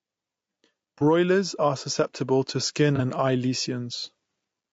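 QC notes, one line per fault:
throughout: gain pumping, the level ducks by roughly 5 dB under each loud syllable, likely from a fast limiter riding an overdriven input.
throughout: low-delay AAC compression, rough, grainy speech with noise between harmonics and a thin, synthetic top, likely AAC-ELD's short frames at about 32 kbps.
0.98 to 1.02 s and 2.96 to 3.01 s: AAC frame loss with concealment, brief smeared, phasey patches just before "are susceptible to skin" and just after "are susceptible to skin", where one lost frame was rebuilt from the previous spectrum.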